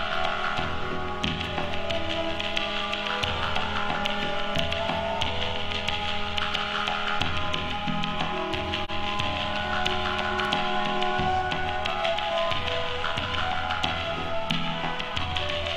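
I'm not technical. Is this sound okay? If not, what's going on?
No. AAC frame loss with muting at 8.84 to 8.91 s: a chunk of audio went missing, likely one lost frame, so the player briefly fades to silence.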